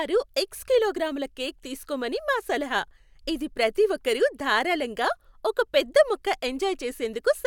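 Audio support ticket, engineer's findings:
No fault found on the speech signal: level, continuity and timing hold steady throughout, with no component or mechanism to flag.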